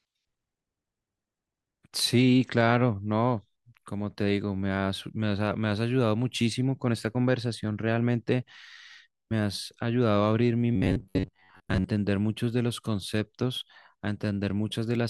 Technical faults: robotic sound from repeated short buffers

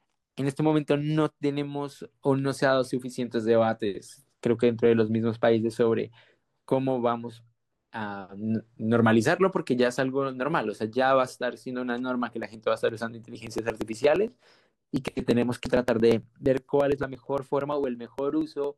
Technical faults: periodic USB or driver dropouts

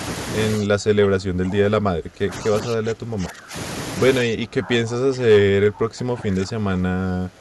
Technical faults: speech suppressed in double talk

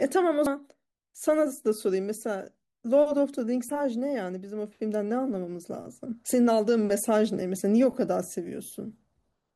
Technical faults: damaged data in a compressed stream

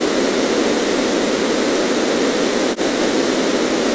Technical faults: speech suppressed in double talk

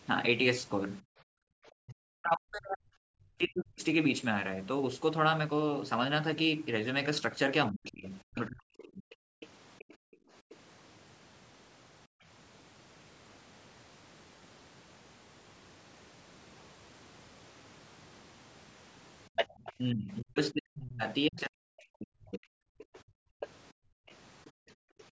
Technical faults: background gated by the echo canceller; speech suppressed in double talk; other side's voice leaking through

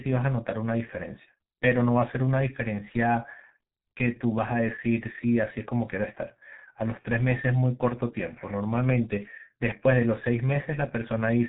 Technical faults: G.723.1 codec

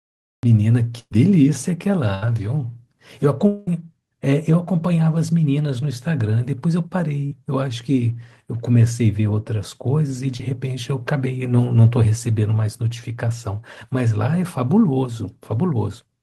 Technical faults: cut-off start; burst of packet loss; long network dropout; short concealed packet loss

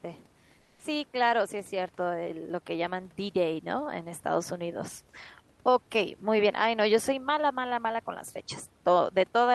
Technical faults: comfort noise in place of the background; onset clipped by the voice detector

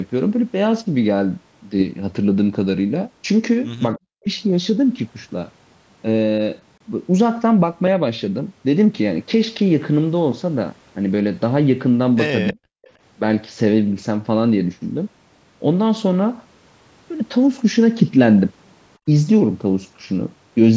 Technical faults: speech suppressed in double talk; echo leak

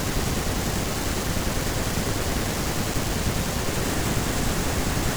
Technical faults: buffer tearing

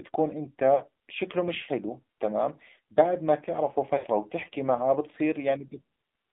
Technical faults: AMR narrowband mobile codec; lost AMR speech frames

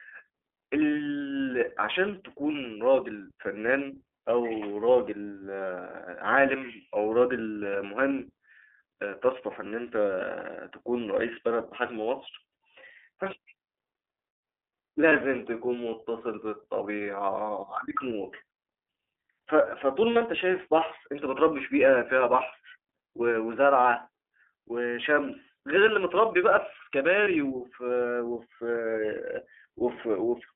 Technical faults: iLBC codec; lost iLBC frames

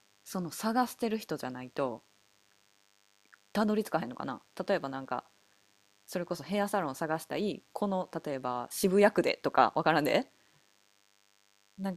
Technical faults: DECT cordless phone buzz

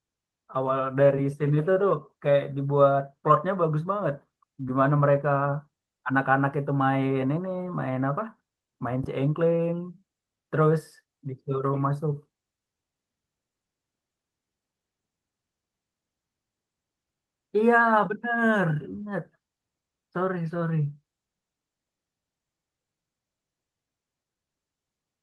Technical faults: none

